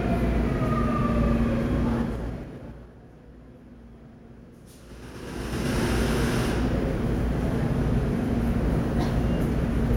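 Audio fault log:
1.95 to 2.97 s, zipper noise. The level falls by roughly 20 dB in steps of 3 dB, about seven a second, with no smoothing between them. Each jump puts a small click in the sound, so a ticking rides on the fade.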